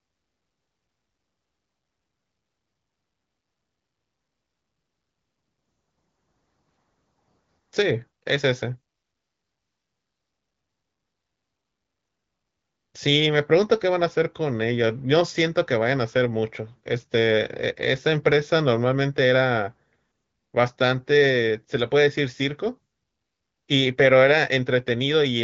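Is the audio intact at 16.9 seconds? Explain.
Yes, the speech at 16.9 seconds is intact, with no dropout, click or distortion at that moment.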